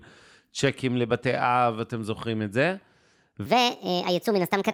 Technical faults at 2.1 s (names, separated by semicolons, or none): none